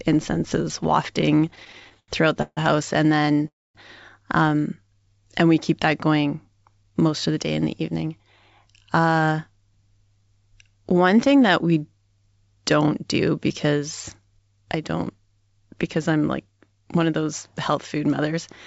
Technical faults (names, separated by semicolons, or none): repeated stalls (stutter); call audio freeze; jitter buffer speed-up